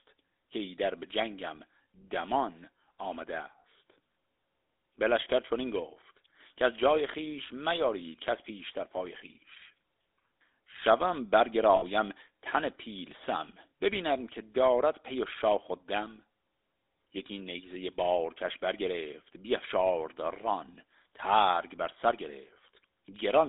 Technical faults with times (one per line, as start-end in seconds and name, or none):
0.00-23.48 GSM full-rate codec
11.76-11.84 lost GSM frames